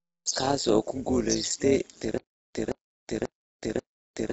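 From the start, the speech sounds rough and grainy, with noise between the harmonics. The top band sounds lowered or synthetic. This is likely low-delay AAC compression, AAC-ELD, at a low bitrate. The damage fits something near 24 kbps.

Throughout, the level also pulses at around 150 Hz, with a depth of about 11 dB. This is overlap-add ripple. Windowed frames were rejoined with an overlap that does not sum to constant gain. The result is a metallic buzz with extra tones around each note.

At 2.18 s a stutter with silent gaps begins and runs to the end. A 171 ms burst repeats four times, every 538 ms. Digital silence of 367 ms sits between repeats. A stalled stream replaying its last fragment is the likely cause. The missing audio is lost.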